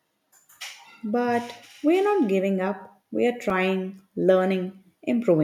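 A single sharp tick at 3.50 s, right after "giving up we are", is a block of digital silence: about 2.9 ms of samples dropped to zero with no fade. The abrupt edges make the click, and the length fits a 128-sample buffer left unfilled in time.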